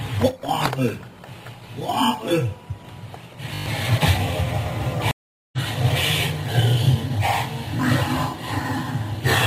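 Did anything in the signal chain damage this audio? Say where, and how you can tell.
Yes, at three separate points. From 0.31 to 0.49 s the level drops abruptly by about 6 dB and then returns just as suddenly. That step is the signature of one channel dropping out ahead of a mono sum, most likely at the analogue wiring or a loose connector. Content shared by both channels halves in amplitude instead of vanishing. That tells it apart from a gain ride or a gate, which would change the level smoothly or cut to silence.

From 3.54 to 3.66 s a system hang loop sits at the driver or buffer stage. A single 20 ms slice repeats six times, producing a short buzz at 50 Hz. The repeats are sample-exact and come at a fixed rate, which fits the hardware cycling through a stalled ring buffer of about that length while the host stopped feeding it. About a tenth of a second of audio never arrives. A codec glitch or dropout would not produce identical repeats like these.

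From 5.11 to 5.58 s a stream reconnect on the network path leaves 415 ms of silence. The audio then picks up roughly half a second further on than where it stopped, so material is skipped rather than delayed. A fresh decoder restarting mid-stream explains both the gap and the jump forward. A buffer underrun would resume exactly where it left off, which rules it out here.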